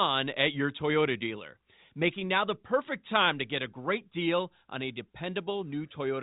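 Nothing here is technically wrong: it's speech carried over ordinary G.711 telephone coding, and the narrow band topping out around 3.8 kHz is just what that format does by design.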